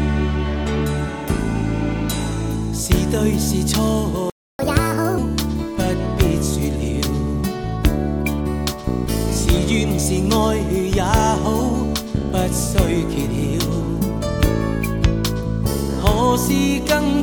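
A playback stall at 4.30 s cuts the sound off mid-flow, leaving about 0.29 s of silence until 4.59 s. The player most likely ran short of data or had its output thread blocked, so nothing reached the output until it recovered.

Catch-up at higher speed follows from 4.59 to 5.18 s. The player resamples its backlog to run 1.5 times faster, raising the pitch by roughly seven semitones, so the sound briefly rushes and turns shrill before settling back to normal speed.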